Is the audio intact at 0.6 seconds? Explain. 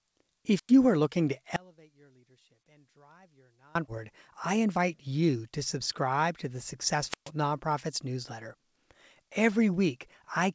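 No, a wireless microphone squelch dropout runs from 0.54 to 0.73 s: the radio signal fades, hiss swells, then the receiver mutes for about 96 ms. That rising static before the hole distinguishes it from a clean digital dropout.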